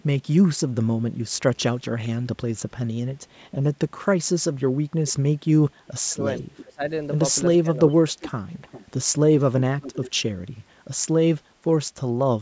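From 1.56 to 1.84 s there is an echo leak. The far side's echo canceller likely let some of its loudspeaker pickup through, so a very faint copy of the speech comes back 417 ms late, far below the direct voice.

From 5.9 to 6.82 s, speech is suppressed in double talk. With both sides talking, the canceller likely mistook the talker for echo and turned everything down. The voice dips, at worst by around 35 dB, for about half a second in all. Inside that stretch, from 6.37 to 6.64 s, a louder echo leak trails 399 ms behind, likely from the same incomplete cancellation.

From 7.62 to 7.99 s comes a milder double-talk dip of about 10 dB, lasting roughly a tenth of a second, likely from the same suppression. It overlaps a longer echo leak from 7.89 to 10.11 s, where the delayed copy again arrives 399 ms late and sits only about 15 dB under the speech, likely residual echo sent back.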